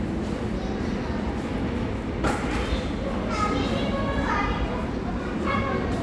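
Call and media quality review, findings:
No audible faults detected.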